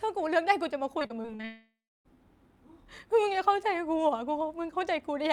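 From 0.99 to 1.45 s the speech breaks up with repeated packet loss, giving a choppy, robotic sound. Six short holes open in quick succession, the longest about 33 ms, and each is patched by stretching the preceding sound, so roughly 30% of this stretch is filler. On a spectrogram the harmonics turn into smeared, repeated blocks with hard vertical edges; the waveform shows abrupt joins where segments repeat.

At 1.45 s the last fragment is drawn out into a fading buzz, then the signal falls away. About 310 ms of near silence follows before the speech returns at 2.17 s, with roughly 0.6 s of material simply gone. This is likely a long network dropout. A spectrogram shows the final frame's spectrum smeared flat and dimming, then an empty band. The waveform tapers into a flat line before resuming abruptly.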